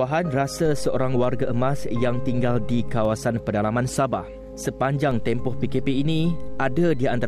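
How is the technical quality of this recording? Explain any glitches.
The recording has two DC step faults. At 0.65 s the waveform's zero line jumps by about -24 dBFS and holds until it steps back at 3.05 s. A second offset of about -25 dBFS starts at 5.11 s and holds to the end. Each jump is heard as a low thump while the sound carries on unchanged.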